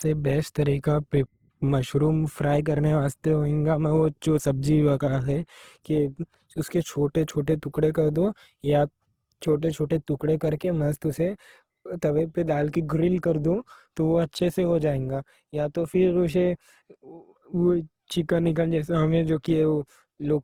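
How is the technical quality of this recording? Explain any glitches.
Quality is limited throughout by coding damage rather than brief glitches. The file's bandwidth looks healthy, but the speech itself sounds degraded.

From start to finish, the speech has a smeared, watery codec texture, even though the spectrum runs up to about 20.2 kHz. This is likely low-bitrate audio saved at a high bitrate. The artefacts fit an earlier encode near 16 kbit/s, which a later high-bitrate MP3 preserved but could not repair.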